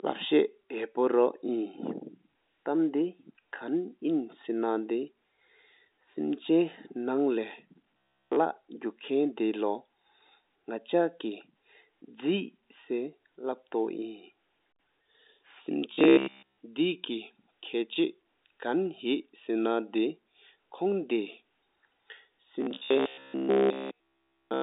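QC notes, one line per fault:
7.97–8.36 s, 15.93–16.59 s and 22.61 s to the end: robotic sound from repeated short buffers. Speech turns into a rigid metallic buzz at 66.7 Hz, entirely repeated in the first and last runs and mostly in the middle one. This is likely from the same 15 ms of audio looping while new audio was skipped. The waveform shows identical 15 ms cycles, and the spectrogram shows flat harmonic stripes every 66.7 Hz across the telephone band.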